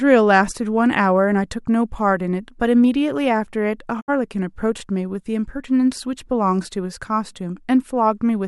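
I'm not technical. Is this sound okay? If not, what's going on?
No. At 4.00 to 4.10 s the speech quickly fades to silence, then returns: a digital broadcast dropout, where the receiver muted after losing a couple of frames.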